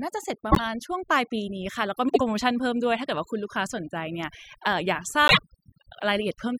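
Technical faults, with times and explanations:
Throughout: overdone noise removal. The reduction is set so hard that bands near the noise floor vanish, leaving twinkly near-silence between phrases.
0.52–0.60 s, 2.08–2.21 s and 5.27–5.39 s: frames out of order. Each stretch plays with its two halves swapped, giving a quick garbled flutter. Halves of about 26, 52 and 26 ms fit one or two codec frames apiece.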